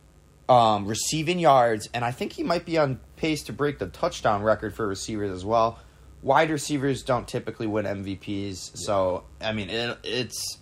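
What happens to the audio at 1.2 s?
At 1.2 s the speech sits over a mains buzz, which runs through the whole clip rather than starting there. Sharp switching spikes from a dimmer, rectifier or unshielded path enter twice every 50 Hz cycle, so harmonics of 50 Hz extend up to several kHz and produce a steady, raspy buzz roughly 35 dB below the speech. A spectrogram shows evenly spaced horizontal lines at multiples of 50 Hz, continuous behind the speech. In quiet gaps the waveform shows small spikes repeating every 10 ms.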